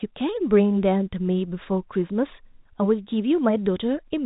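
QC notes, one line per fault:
No faults are heard in this speech clip. The G.711 telephone coding behaves as expected, with the band stopping near 3.8 kHz and any coding damage at most faint, which fits A-law at 64 kbps.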